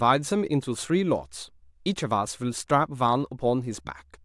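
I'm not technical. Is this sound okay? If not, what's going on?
Yes, this speech recording has no technical faults that a listener would notice.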